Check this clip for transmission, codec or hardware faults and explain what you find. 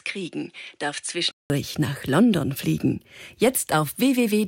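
One fault is present. From 0.0 to 1.5 s the audio has nothing above 10.5 kHz, sits roughly 5 dB lower and carries its own noise floor about 50 dB down. A 188 ms silence at the switch precedes fuller sound. This is likely an input switched to a poorer device with a narrower band.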